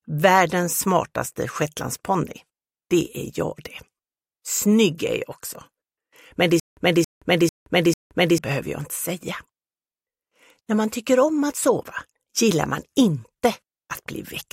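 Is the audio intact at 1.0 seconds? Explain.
Yes, the audio is intact at 1.0 seconds, with nothing at that point that breaks, drops or distorts the sound.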